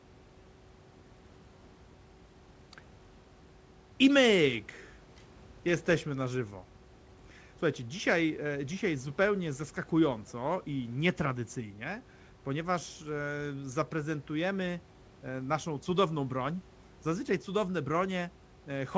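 No technical faults occur anywhere in this speech clip.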